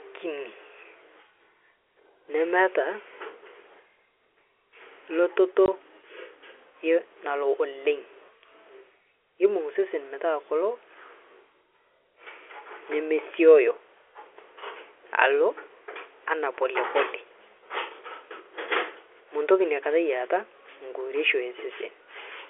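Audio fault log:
5.66–5.68 s, packet loss filled with silence: the audio drops out completely for 20 ms, a gap length that fits a single lost packet, and the receiver inserted digital silence rather than concealing the hole. Because the waveform is cut off and resumes abruptly, the brief gap has hard edges. The surrounding audio carries the narrow telephone band of the G.711 line, roughly 300 Hz to 3.4 kHz.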